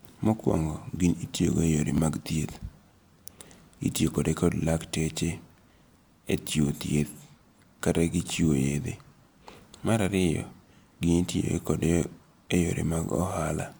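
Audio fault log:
1.97 s, 4.15 s and 12.04 s: repeated buffer. Fresh audio arrived late each time, so the previous block played once more with a hard join. The duplicate is so brief, which fits a 10 ms buffer, that it is heard as a click or brief buzz.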